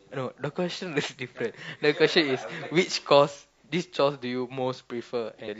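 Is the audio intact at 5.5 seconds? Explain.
No. Compressed frames were skipped from 5.44 to 5.48 s. Roughly four frames, about 200 ms of audio, never play. The sound jumps ahead.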